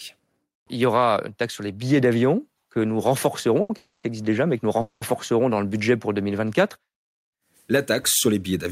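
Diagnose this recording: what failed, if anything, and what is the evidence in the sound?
Network and jitter buffer: a short stall from a late packet at 3.61 to 3.71 s. The last sound is held for about 80 ms with a faint buzz or dip, and then the speech resumes where it stopped with nothing missing. On a spectrogram the harmonics run flat and unchanging. The waveform repeats one period.

Call audio freeze, also at the network stage: at 3.77 to 4.05 s, just before "existe déjà mais que", and again at 4.81 to 5.03 s, just after "déjà mais que nous", the sound is drawn out into a fading buzz or hiss for 260 ms and 200 ms. There is no silence and nothing is lost. The likely cause is packets held up in transit until the jitter buffer ran empty. A spectrogram shows smeared horizontal bands decaying, and the waveform shows a shrinking periodic tail.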